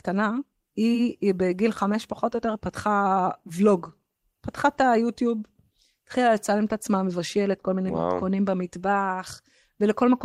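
Nothing stood out on listening to the speech in this clip.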